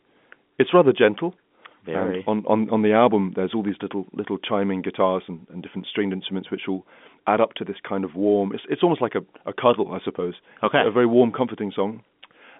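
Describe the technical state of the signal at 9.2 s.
At 9.2 s the speech is intact, carried through the G.711 telephone coding as usual with its narrow band and nothing above about 3.7 kHz.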